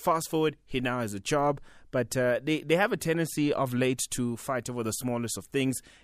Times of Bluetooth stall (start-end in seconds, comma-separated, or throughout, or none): none